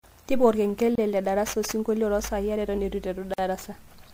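At 0.95 s and again at 3.34 s the speech just drops out for a moment, about 27 ms the first time and 46 ms the second. That's a gap at a join of encoded pieces: the audio was encoded in chunks and stuck back together untrimmed, so each chunk's encoder start-up delay and last-frame padding stay in as silence. The edges are smeared, and the speech resumes exactly where it left off.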